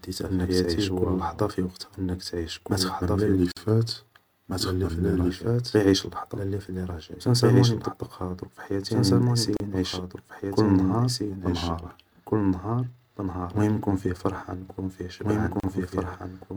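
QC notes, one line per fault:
Throughout: doubled audio track. A second full-band copy of the speech trails by about 1.5 s at roughly 5 dB down, likely from a slower second capture path.
3.39 to 5.30 s and 11.30 to 12.23 s: drift correction step. Playback slows 5.9% and pitch drops 105 cents, about a semitone. This is likely clock-matching software changing the playback rate in one step to refill or drain its buffer. The first starts after "ما تخمم لا". The second starts after "نعيش كل نهار".
3.52, 9.57 and 15.60 s: gap at a join of encoded pieces. Silences of 49, 34 and 34 ms recur every 6 s. Their edges are smeared, as separately encoded pieces keep their start delay and end padding. The 9.57 s gap falls between "مطبقها في حياتي راني" and "نعيش كل نهار".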